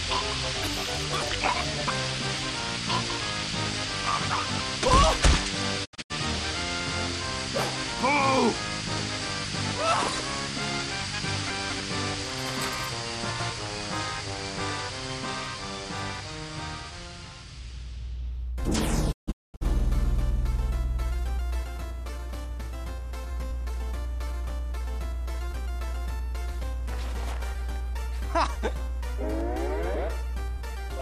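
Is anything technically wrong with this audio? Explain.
Yes, there are two kinds of fault.

Chunks out of order occur at 4.3 to 4.6 s, 11.5 to 11.8 s and 13.3 to 13.5 s. In each, a 100 ms block of audio was written late and plays after blocks that should follow it: two blocks late at the first two points, one block late at the third. Nothing is missing, but the sequence is scrambled and each rearrangement leaves three hard joins, so these moments sound jumbled.

The digital broadcast dropout occurs at 5.84 to 6.12 s and again at 19.11 to 19.63 s. The receiver lost valid frames and muted until good ones returned, fading out and back in over about 20 ms each time. In the first, about 170 ms of audio is missing across 240 ms, in several short holes, the longest 72 ms. In the second, about 410 ms is missing across 480 ms, with one gap of 216 ms. The result is a stuttering series of silences, and the audio that fell in those gaps is lost.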